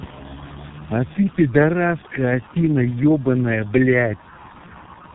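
A speech clip with tandem speech coding throughout: the audio was decoded and re-encoded across several codec borders, which sounds like about four speech coders in a row, ending with something like G.723.1. Each coder compounds the previous one's damage, leaving rough, muffled, warbly speech with nothing above 3.8 kHz.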